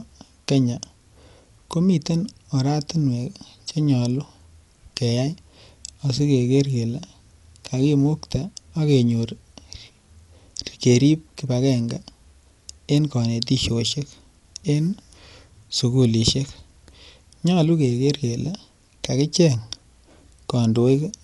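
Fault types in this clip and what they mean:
Dolby Digital compression: speech is band-limited with nothing above about 11.4 kHz, sounding dull, and the codec damage is plainly audible as rough, fluttering noise around tonal parts, likely from AC-3 coding at a low bitrate near 64 kbps, where many frequency lines are left as dither-filled noise.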